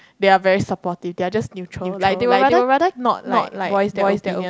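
Likely a slower second capture path: from 1.83 s onward, a doubled audio track repeats the speech, equally loud and dry, about 300 ms late.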